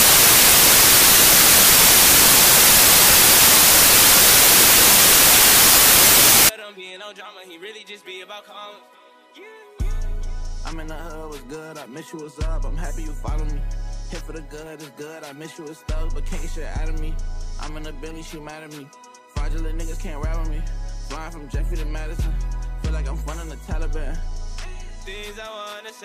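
From the start until about 6.49 s, the audio suffers from samples built from the wrong bytes. Each sample's bytes are being assembled in the wrong order or with a one-byte misalignment, so the rapidly varying low-order bits end up as the most significant part of every value. The result is loud, harsh broadband noise, close to white on the louder sounds. Unlike ordinary background hiss, it tracks the original's presence rather than sitting as a steady floor.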